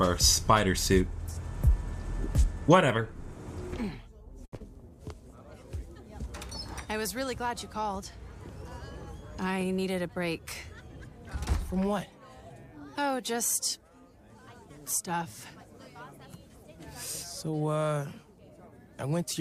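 At 4.45 s there is a short stall from a late packet. The jitter buffer ran dry. The receiver held the last sound for 70 ms until the packet came. Nothing is lost. The sound is drawn out, with a faint buzz or dip. Playback now runs 70 ms later.

From 4.56 to 4.62 s comes a short concealed packet loss. 60 ms of audio never arrived. The receiver bridged it with 36 ms of continued sound, then blended back. This skipped about 20 ms ahead. It is heard as a brief smear.

From 9.49 to 10.09 s the jitter buffer speed-up starts. The buffer held too much audio. The receiver cut tiny pitch-period slices to drain it, about 70 ms in all. The sound plays at 112% speed, pitch unchanged. It feels briefly hurried.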